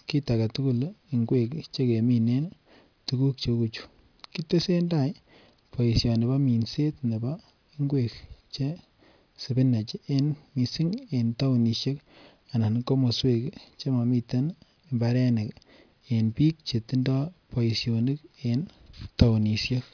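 No technical faults can be heard anywhere in the speech.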